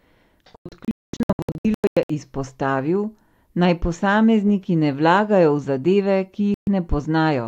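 From 0.56 to 2.10 s the speech drops into scattered silent holes, the longest 0.22 s, and again briefly at 6.54 to 6.68 s. This is digital broadcast dropout: the receiver mutes on failed frames, leaving clean silence rather than concealment.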